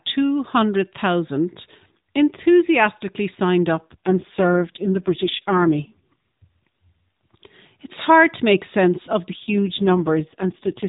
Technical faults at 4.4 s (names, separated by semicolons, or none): AMR rate drop